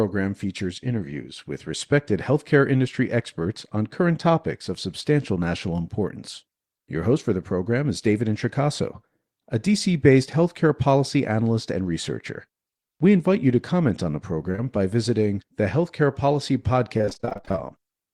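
At 14.51 to 14.56 s and again at 14.56 to 14.60 s comes short concealed packet loss: two back-to-back holes of about 20 ms each, fitting 20 ms packets, patched by extending the preceding sound. They pass as a quick smear or wobble, not a sustained change in texture.

From 16.98 to 17.59 s, repeated packet loss gives a robotic sound. Around sixteen holes, none longer than 22 ms, arrive in quick succession, so nearly half the stretch is synthesized continuation. Unlike the isolated smears earlier, the fills never settle, leaving choppy speech with fragments missing.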